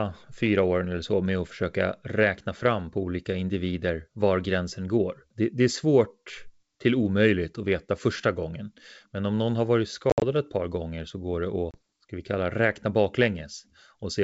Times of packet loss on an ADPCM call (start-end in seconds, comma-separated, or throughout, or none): 10.10-10.24, 11.71-11.78